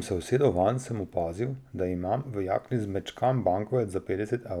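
No technical faults can be heard anywhere in the speech recording, and the signal stays steady and continuous throughout.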